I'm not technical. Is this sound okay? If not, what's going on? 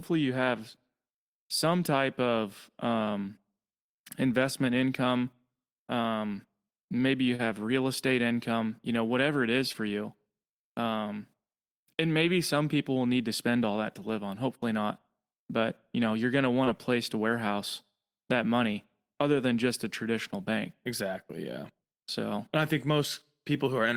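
No, there's short concealed packet loss: tiny bits of the call arrived late, and the receiver papered over them. You hear brief smears at 7.35 s after "maybe you", 9.73 s after "know whatever it is", and 16.64 s after "know you're going to".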